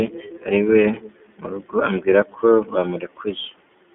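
Throughout, the speech carries iLBC codec coding: passband 250 Hz to 3.5 kHz, a flat spectrogram ceiling, and plainly rough, synthetic texture fitting 30 ms frames.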